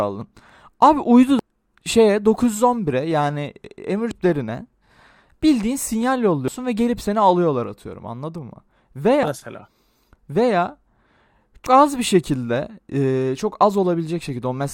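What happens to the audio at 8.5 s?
Clock drift buffer slips span 0.21–14.29 s: a click every 1.72 s, likely mismatched clocks dropping or repeating a few samples, each a thin vertical spectrogram line.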